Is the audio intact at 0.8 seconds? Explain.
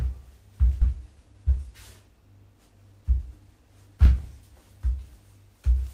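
No. At 0.81 to 0.83 s the sound lurches abruptly forward, as though a piece had been snipped out and the two ends butted together, with no silence bridging the join. This is a skip ahead: roughly seven tenths of a second of audio was discarded, either in transit or by an overflowing jitter buffer, while later audio was already queued. Playback resumed at that later audio, shortening the delay by about the same amount.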